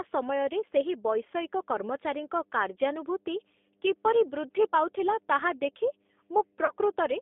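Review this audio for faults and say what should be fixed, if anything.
Mains hum runs throughout: a steady 50 Hz tone, roughly 30 dB below the speech, leaking in from the power line. Break the ground loop or move the transformer away.

G.729 codec damage is plainly audible throughout. The band runs only from 250 Hz to 3.6 kHz, and the speech sounds rough and synthetic, which points to an 8 kbit/s G.729A codec. Use a wideband codec instead.

VoIP packet loss concealed by the speech codec appears from 6.65 to 6.75 s. About 30 ms went missing, which fits a single lost packet. The decoder filled the gap with a fading extension of the last sound, and the speech stays weak briefly after it. Improve network reliability or add forward error correction.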